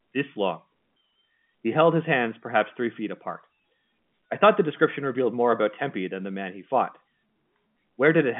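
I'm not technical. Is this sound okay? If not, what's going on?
Yes, nothing is wrong here.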